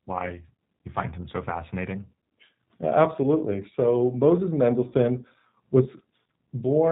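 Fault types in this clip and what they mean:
G.729 codec: The speech was passed through an 8 kbit/s G.729 voice codec, which rebuilds each 10 ms frame from a vocal tract model, a pitch predictor and a few pulses. Nothing above 4 kHz survives, so the voice sounds dull, rough and plainly synthetic throughout.
VoIP packet loss concealed by the speech codec: 20 ms of audio was lost in transit, which points to one dropped packet. The decoder covered the gap by stretching its last pitch and filter at falling gain. From 4.90 to 4.94 s the voice smears into a brief, fading stretched sound.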